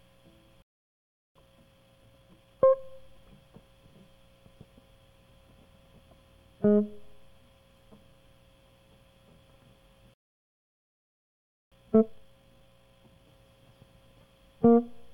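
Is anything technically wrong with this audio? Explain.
Yes, the music twice cuts out and then rushes to catch up.

Playback stall, 0.62 to 1.36 s and 10.14 to 11.72 s: the music drops to silence mid-phrase for about 0.73 s, then for about 1.58 s. This is likely the player running dry of buffered data or having its output thread blocked, so nothing reaches the output until it recovers. Both gaps sound like abrupt dead air rather than a fade.

Time-compressed catch-up, 1.36 to 2.81 s and 11.72 to 13.28 s: right after each gap, the player trims its accumulated backlog by dropping short slices of audio and cross-fading the seams. The first stretch runs at 1.5 times normal speed and the second at 2 times, yet the pitch stays put. The passage sounds hurried, and the second is noticeably more rushed.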